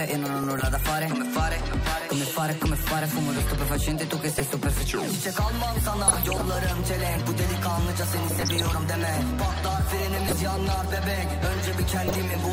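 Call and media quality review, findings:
DAB burbling at 0.43–0.73, 4.24–4.40, 6.08–6.42, 8.30–8.71, 10.16–10.39 and 12.06–12.15 s. These are short noise blips and level jumps in single MP2 sub-bands, each lasting up to a frame. The cause is residual bit errors of a few tenths of a percent getting past the error correction. Unlike packet-loss dropouts, burbling does not mute the audio.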